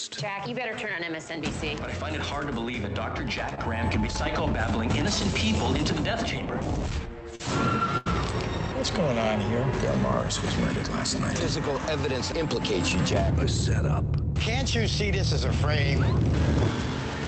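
Audio passed through an Opus call path at 48 kbps, band-limited to about 8 kHz. Several 20 ms frames were lost packets rebuilt from error correction, starting at 3.51, 3.57, 3.81, 7.39, 7.47 and 8.06 s. The next packet carried a low-bitrate copy of each lost one. The decoder played that copy, so no gap is heard, but those moments sound rougher and noisier. Short concealed packet loss occurs at 3.55 to 3.59 s and 7.35 to 7.41 s. About 20 ms and then 40 ms of audio never arrived in time. The receiver extended the preceding sound to cover each hole, heard as a brief smear or wobble before the real signal returns. A burst of packet loss runs from 7.97 to 8.08 s, with about 80 ms missing. Here the concealment holds the last sound and fades it over the gap. The audio then jumps ahead, with that stretch gone.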